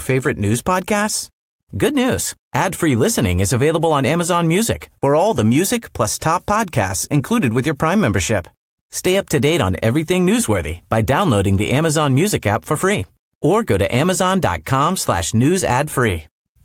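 Listening through the speech, nothing stood out as a technical problem at any point.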